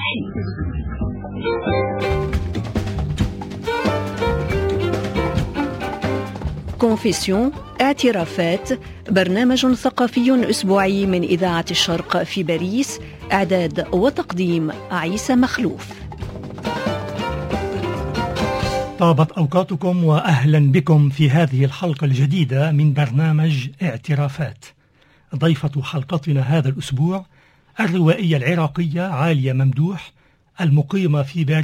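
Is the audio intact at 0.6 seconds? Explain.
No. Adaptive stream starting at a low bitrate: until 2.0 s the player is on a very low-bitrate stream, so nothing above 5 kHz survives and codec artefacts are stronger, which fits a rate near 8 kbit/s, before quality abruptly improves.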